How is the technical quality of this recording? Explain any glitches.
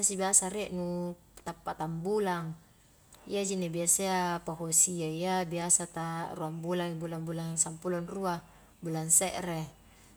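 Nothing to flag: the recording has no audible technical faults.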